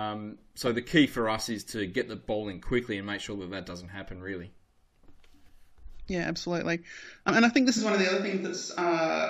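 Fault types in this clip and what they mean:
Compressed frames skipped: At 7.28 s, just before "and I think this", the audio jumps ahead by roughly 100 ms, about four frames of 23.2 ms. Those frames never reached the output.
Switch to a distant microphone: From 7.79 s to the end, just after "and I think this", the sound suddenly turns roomy and hollow, with less bass. The level stays about the same. Room noise sits roughly 35 dB below the speech. The likely cause is a failed close microphone.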